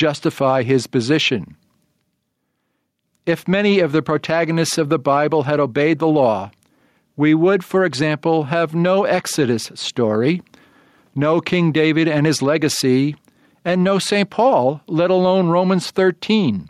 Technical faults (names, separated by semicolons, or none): gain pumping